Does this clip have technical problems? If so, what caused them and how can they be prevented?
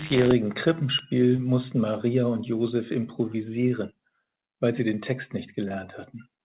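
Yes. Short concealed packet loss occurs at 1.36 to 1.40 s and 5.68 to 5.72 s. In each, about 20 ms of audio arrived too late, and the receiver extrapolated the preceding sound before crossfading back, leaving a brief smear. Both gaps sit within the narrowband call path, whose content stops at 4 kHz. Preventing this requires reducing network jitter and loss with a wired connection, QoS prioritisation, or a larger adaptive jitter buffer.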